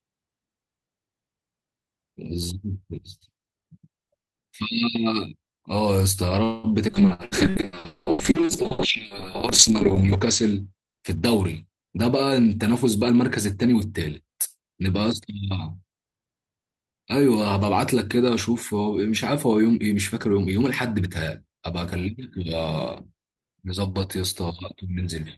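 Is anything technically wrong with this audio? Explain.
Yes. The speech has four kinds of fault, all from the call path.

At 6.43 to 6.67 s there is a call audio freeze, likely caused by packets held up in transit so the jitter buffer ran dry. For about 0.2 s the receiver stretches the last sound into a fading buzz or hiss. When packets resume, the speech continues exactly where it stopped, so nothing is lost. The pause is inserted, and everything after it lands about 0.2 s later.

From 6.90 to 12.60 s a call bitrate drop follows: the bandwidth estimate fell and the encoder was pushed from 32 kbps down to 6 kbps, staying at the lowest rate for nearly 2 s. At that rate the codec quantises coarsely and narrows the band from 20 kHz to 8 kHz. The speech turns muffled and rough, with a watery edge, until the rate climbs back.

Inside that stretch come three bursts of packet loss, at 7.13 to 7.22 s, 7.25 to 7.35 s and 7.50 to 7.58 s. 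Each time about 60 ms of packets never arrived in time to play. The receiver extends the last sound and lets it fade, heard as a brief held buzz or hiss. The speech then jumps ahead, so the section in between is gone.

From 11.82 to 13.92 s a jitter buffer speed-up sets in. The buffer had built up more audio than its target, so to cut the delay the receiver repeatedly removed short pitch-period-sized slices, roughly 0.2 s in all. Pitch stays the same, but the speech runs about 10% fast and sounds hurried.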